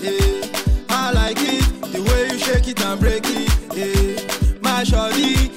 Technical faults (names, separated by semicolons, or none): none